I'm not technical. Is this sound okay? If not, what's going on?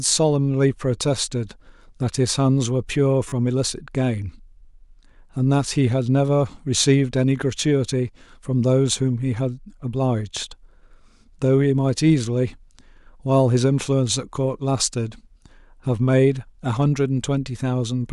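No. At 3.29 to 3.32 s the speech has a repeated buffer fault. New audio didn't reach the playback device in time, so it replayed the last small chunk of sound, about three more times, each joined hard to the next. The chunk is tiny, which fits a 10 ms buffer, so instead of an obvious stutter you hear a brief buzz or click, and roughly 30 milliseconds of the real speech is skipped.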